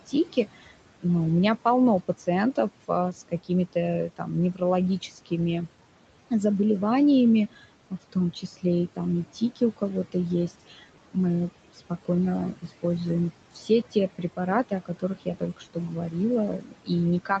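Noise suppressor artifacts run throughout: the suppressor pulls steady room noise down by about 18 dB between phrases, leaving a residue that rises again under the speech. Speech cut by the noise suppressor occurs from 0.07 to 1.05 s, 2.08 to 5.32 s, 7.51 to 12.84 s and 13.51 to 17.4 s. Quiet speech was mistaken for noise and dropped by about 16 to 19 dB, so endings sound swallowed. Within those spans, the affected stretches total about a third of a second, half a second and a full second for the first three.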